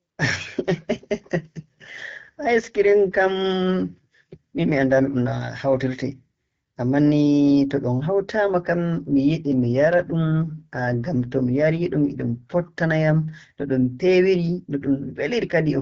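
From 1.58 to 5.08 s, and again from 9.07 to 12.50 s (after "hawtaama kam" and before "fottana yam"), the speech turns rougher and more synthetic, with no gap and no loss of bandwidth. This is an AMR rate drop. The network pushes the wideband AMR-WB codec to a lower rate, which fits a fall from 12.65 to 8.85 kbit/s, and spends the freed bits on error protection. The voice clears again when the rate returns to 12.65 kbit/s.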